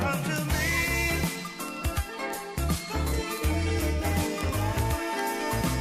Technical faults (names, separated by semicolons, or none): word clock ticks